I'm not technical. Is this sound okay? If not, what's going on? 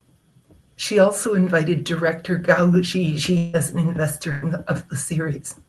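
No. Two gaps in the speech have been patched over.

From 3.37 to 3.55 s, about 160 ms of sound is missing. The receiver filled the hole by stretching out the last bit of sound it had, so you hear a brief fading buzz or hiss instead of the real speech, and then the talking picks up a little further along. This is likely a long network dropout, where the connection briefly stopped delivering audio. There's no dead silence, just the filler sound.

At 4.31 to 4.43 s, a burst of packet loss removed about 100 ms. The receiver repeated and faded the last sound, which comes across as a short held buzz or fading hiss, and the speech then jumps ahead past the lost piece.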